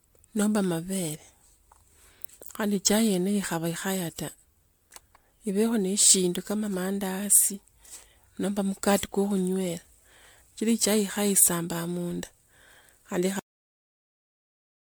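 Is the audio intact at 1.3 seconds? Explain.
No. At 1.3 seconds, as throughout, the speech sounds swirly and hollow with blurred attacks. This is likely generation loss from around ten MP3 passes, consistent with 128 kbit/s. A spectrogram would show smeared holes and an empty band above 19.9 kHz.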